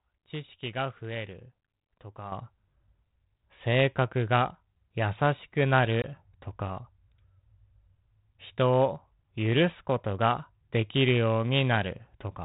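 At 2.32 s the level jumps up by about 9 dB between one sample and the next, and it stays there to the end. This sudden gain jump lifts the speech and the background noise together. A digital gain change applied without a ramp is the likely cause.

At 6.02 s a hard-edged hole of about 20 ms opens, roughly one packet's worth, and the sound resumes by 6.05 s. This is packet loss on an ADPCM call. The decoder's predictor and step size lose step with the sender. Speech returns slightly distorted, then settles. The narrow band, cut off at 4 kHz, fits G.726 at 32 kbit/s.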